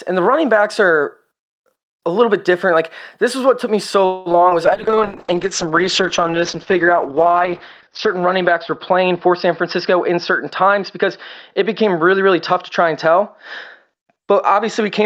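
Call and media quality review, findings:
Call audio freeze, 4.05 to 4.28 s, right after "what took me so". Likely cause: packets held up in transit, jitter buffer ran dry. Receiver stretched the last sound into a fading fill for about 0.2 s. Nothing lost; the audio resumes late.

Short concealed packet loss, 4.32 to 4.44 s and 4.49 to 4.53 s, just after the freeze. Decoder missed about 20 ms of packets each time. The gap was filled by extrapolating the preceding sound and then crossfading back. Audible as brief smears or wobbles in the recovering audio.

Call bitrate drop, 4.66 s to the end. The bandwidth estimate fell and the Opus target went from 48 to 8 kbps, holding at the floor for about 3.4 s. Audio band cut from 20 kHz to 6 kHz. The sound becomes muffled, rough and watery.

Jitter buffer speed-up, 9.03 to 10.18 s and 11.60 to 12.21 s. The buffer sat above its target delay, so the receiver trimmed pitch-period slices, about 70 ms and about 40 ms of audio in total, running at 105 % speed. 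Pitch stays the same; the delivery sounds hurried.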